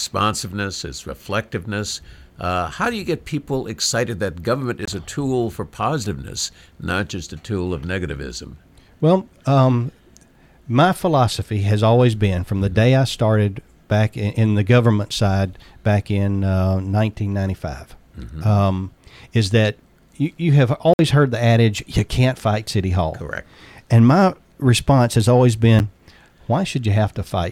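A speech recording with three brief dropouts to silence, at 4.85–4.88 s (about 22 ms), 20.94–20.99 s (about 55 ms) and 25.79 s (about 8 ms), each resuming without a fade. These are likely Bluetooth stalls, where delayed packets let the receiver's buffer run empty until retransmitted audio arrived.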